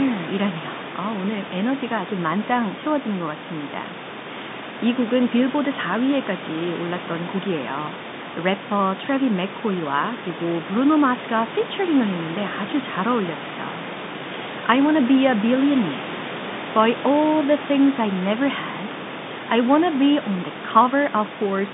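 The speech comes through a G.711 A-law telephone path at 64 kbps, limited to a line band of roughly 150 Hz to 3.7 kHz, with room noise sitting about 14 dB below the speech and no technical faults to report.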